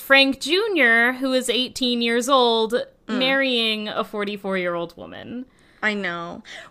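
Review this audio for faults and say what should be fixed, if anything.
Throughout the speech, faint ticks recur at 10 Hz: a resampler restarted on every block, converting 48 kHz to 44.1 kHz in 100 ms chunks with no history at the edges. Unlike dropouts, the ticks keep strict time and vanish in silence. Carry the converter's filter state across blocks.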